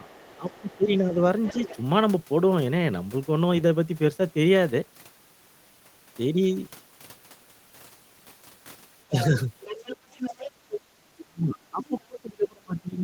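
From 0.0 to 1.19 s the speech dips by up to about 15 dB: speech suppressed in double talk, likely the echo canceller ducking the talker while both sides spoke. The other side's voice leaks through faintly, about 30 dB down, at 0.08–0.77 s and again at 1.45–1.77 s, about 20 dB down. This is likely residual loudspeaker echo the canceller failed to remove. From 9.09 to 9.33 s a brief dip of about 10 dB recurs. From 9.19 to 10.81 s the far voice is strongest, about 10 dB below the speech, with a short scrap at 11.19–11.24 s. From 11.24 s to the end the speech is cut by up to about 30 dB, and leakage surfaces again at 11.83–12.0 s.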